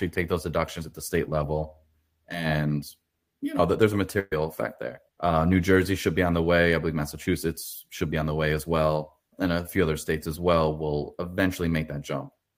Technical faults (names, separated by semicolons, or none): burst of packet loss